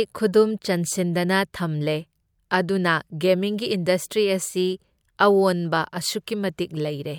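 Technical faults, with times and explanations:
The speech signal carries no audible technical faults.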